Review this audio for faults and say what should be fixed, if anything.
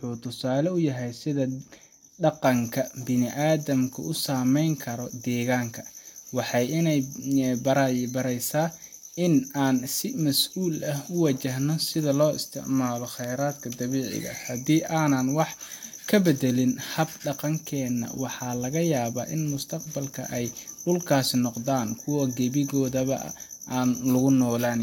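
From 2.44 s to the end, the speech has pre-emphasis left on. The treble was boosted ahead of a transmission or recording stage and the matching de-emphasis never got applied, so the top end stays lifted. It follows the FM 75 µs curve, which puts 10 kHz about 14 dB above 1 kHz. That's why sibilants hiss, the voice turns thin and bright, and the body drops away right after 2.44 s. To prevent it, make sure every stage that applies pre-emphasis is paired with a matching 75 µs de-emphasis before the signal is recorded or passed on.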